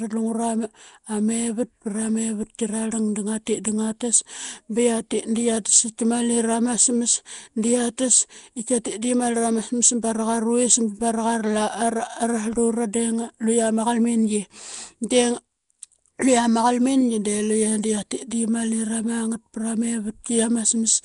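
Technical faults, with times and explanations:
Throughout, Nellymoser compression: the audio was likely passed through the Nellymoser Asao codec, which codes short blocks at a fixed, low bit budget, consistent with a rate around 44 kbps. Quiet frequency bands receive no bits and are replaced with synthetic noise, so the speech carries a plainly audible rough, hissy fringe and a smeared, watery blur on each syllable. Nothing is present above 10.6 kHz, dulling the top end.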